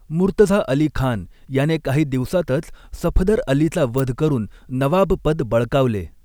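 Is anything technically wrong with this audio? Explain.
Yes. From 3.98 to 4.00 s the speech carries an electrical switching spike, a sharp snap peaking not far below full scale. It was likely picked up from a nearby switch or motor arcing onto the line. Unlike a dropout, nothing is missing; the snap sits on top of the speech.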